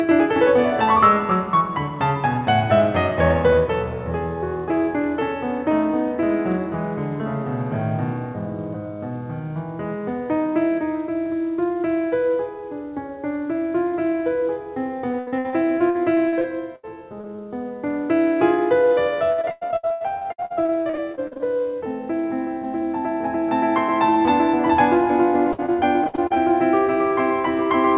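Repeated packet loss (robotic sound) runs from 15.12 to 16.85 s. Packets kept arriving late or not at all, and each hole, the longest 75 ms, was patched by stretching the preceding sound. About a quarter of that span is filled in this way, so the music turns choppy, with pieces dropping out. Throughout, the audio carries nothing above 4 kHz, which fits a narrowband G.711-style call codec.

Short concealed packet loss follows at 17.21 to 17.25 s and again at 17.36 to 17.40 s. Each time about 20 ms of audio failed to reach the decoder. The receiver continued the last sound across the hole and blended back into the real signal, leaving a brief smear or wobble in the music.

Repeated packet loss (robotic sound) returns from 19.32 to 21.41 s, the heaviest stretch. Gaps up to 100 ms recur in quick succession, and about 39% of the span is concealed, so the music sounds choppy and broken up. A final burst from 25.52 to 26.38 s has gaps up to 60 ms and about 25% concealed, with the same choppy texture.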